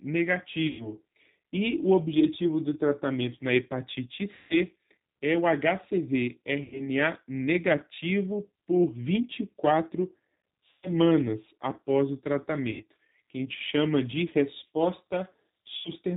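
Throughout the speech, the G.729 codec is plainly audible, here in its G.729A form at 8 kbit/s. The voice is rebuilt from a vocal tract filter, a pitch predictor and a few pulses per frame, so it sounds rough and synthetic, and nothing above 4 kHz comes through. A simple 4 kHz low-pass would only dull the sound.

VoIP packet loss concealed by the speech codec occurs six times: 0.67 to 0.94 s (120 ms lost), 4.35 to 4.58 s (150 ms), 6.63 to 6.89 s (90 ms), 10.71 to 10.91 s (120 ms), 12.71 to 12.84 s (90 ms) and 15.76 to 15.92 s (90 ms). Each missing span is a multiple of 30 ms, which fits 30 ms packets. The decoder fills each gap by extending the last pitch and filter at falling gain, producing a stretched buzzy tone or coloured noise that fades. The voice stays weakened briefly after each gap. A plain dropout would cut straight to silence, but these gaps are filled with a fading, smeared continuation.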